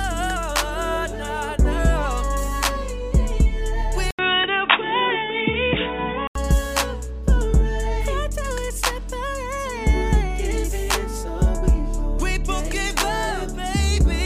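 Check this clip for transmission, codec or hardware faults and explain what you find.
One fault stands out: an input switched to a poorer device. From 4.11 to 6.35 s the sound turns dull and boxy. An 80 ms silence opens the change. Nothing above 3.8 kHz gets through. A new background noise appears, about 30 dB below the signal. The level stays roughly the same. The likely cause is the system changing its input mid-recording to a narrower-band microphone or a headset's call profile. At 6.35 s the full bandwidth returns.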